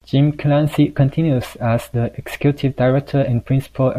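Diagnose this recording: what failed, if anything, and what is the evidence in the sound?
Nothing failed; no stage shows any audible problem.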